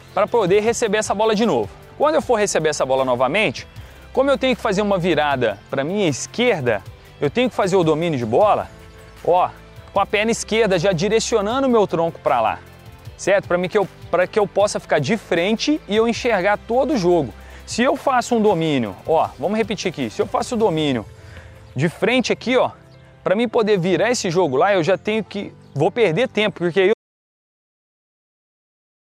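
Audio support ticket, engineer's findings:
Audio dropout to silence at 26.94 s, running to the end of the clip. Sound cuts off mid-flow into silence, no room tone, for about 2.1 s. Likely lost input (device disconnect, failed link or stray mute) while the recorder kept writing silence.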